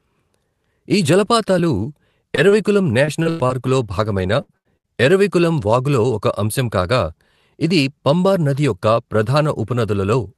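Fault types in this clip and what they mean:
Repeated packet loss (robotic sound): from 2.35 to 4.87 s the speech breaks up nine times as packets go missing, with the longest hole lasting 96 ms. Each gap is papered over by extending the sound just before it, so about 17% of that stretch is concealment rather than real signal. The result is choppy, robotic speech with pieces missing, until it resumes at "ఎరవికులం వాగులో ఒక అంశం".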